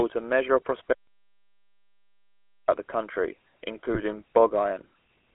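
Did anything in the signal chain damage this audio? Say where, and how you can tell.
Yes. The codec stage shapes the whole clip. This is GSM full-rate coding. The audio is confined to the telephone band, about 300 Hz to 3.4 kHz, with nothing above it. A buzzy, gravelly roughness sits on the speech throughout and is plainly audible. The codec models the vocal tract and drives it with a sparse pulse excitation, keeping only a fraction of the detail. That coarse excitation is what makes the grain. The sound fits the 13 kbps full-rate codec.

There is an audio dropout to silence from 0.93 to 2.68 s, about 1.75 s long. The speech cuts off right after "a measure of" and resumes at "the country". The gap is silent with no room tone underneath. So this is not a quiet passage in the recording. The input or link was likely lost upstream while the encoder kept writing silence. Whatever was spoken in between is gone.

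GSM bit errors appear from 3.90 to 4.00 s, just after "the country". For about 100 ms the speech breaks into a short burst of distorted, garbled sound. This happened on the radio link. Corrupted bits reached the decoder and upset its filter, pitch or gain values. The spectrum bends or the level jumps for those frames. The burst fits a few damaged 20 ms frames at an error rate of around half a percent.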